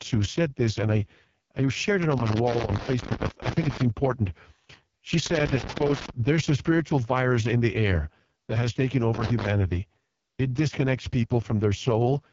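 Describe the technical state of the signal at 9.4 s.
At 9.4 s, loose connector crackle is under way, running 9.14 to 9.48 s just after "air that has taken". A flickering contact chops the signal, showing as ragged spikes on the waveform and broadband vertical streaks on the spectrogram.

Beneath it sits heavy AMR wideband (HD Voice) codec damage whose rough, raspy texture points to its lowest mode, around 6.6 kbit/s. The spectrogram shows smeared, noise-filled upper bands and nothing above 7.5 kHz.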